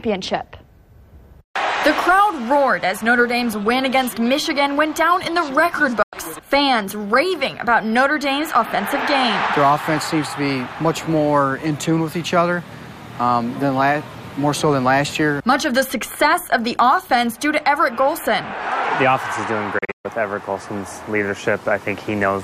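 At 6.02 s a digital broadcast dropout mutes the audio for about 96 ms. It fades out over 8 ms, then returns. At 19.78 s another dropout leaves several holes across 256 ms, losing 192 ms in total. The longest hole lasts 128 ms.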